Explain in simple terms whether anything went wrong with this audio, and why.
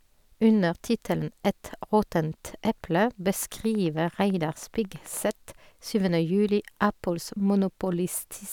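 From 3.43 to 5.29 s a train of clicks, about twenty even ticks at roughly nine per second, sits over the speech, likely from electrical interference; vinyl-style crackle would be random.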